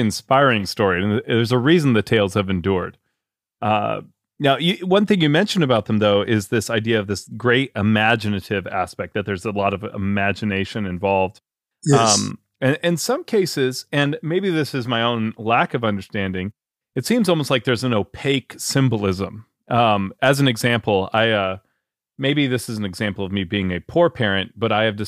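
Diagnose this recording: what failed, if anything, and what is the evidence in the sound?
Hard clipping is the failure here, most likely at the converter or the gain stage feeding it. The speech peaks overrun the available range in four brief spots: a single tick at 7.50 s, 8.06 to 8.12 s just before "aspect that there's a", 20.24 to 20.29 s just before "an example", and 21.17 to 21.21 s right after "an example". The overload is small, about 0 to 2 dB, so the flattened tops come through as short crackles on loud syllables.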